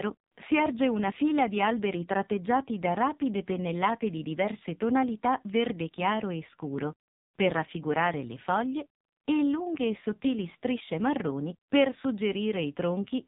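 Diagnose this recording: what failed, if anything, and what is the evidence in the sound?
The fault is at the codec stage: an AMR narrowband mobile codec applied across the whole speech clip, with heavy damage. Nothing above about 3.8 kHz survives, and the voice takes on a buzzy, synthetic texture that fits a low AMR-NB mode around 5.9 kbps. AMR-NB rebuilds speech from a vocal tract model excited by a pitch predictor and a few pulses per 5 ms subframe. A plain telephone-band filter would only dull the sound, without that artificial, modelled quality.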